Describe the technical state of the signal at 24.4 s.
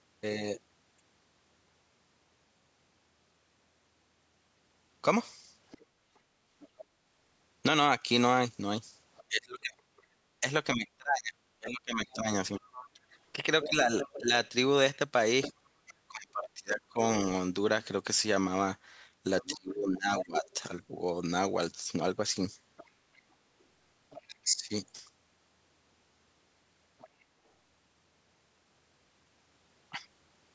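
At 24.4 s the main talker's speech sags sharply, falling by roughly 20 dB over about four tenths of a second between 24.21 and 24.71 s. This is speech suppressed in double talk. The likely cause is an echo canceller that couldn't tell the near talker from the loudspeaker return while both were active, so it turned everything down.

Underneath runs a second, fainter voice, roughly 15 dB below the main speech, present from 19.41 to 27.23 s. It is the other side's voice leaking through, likely because the far end's loudspeaker sound reached the microphone and was only partly cancelled.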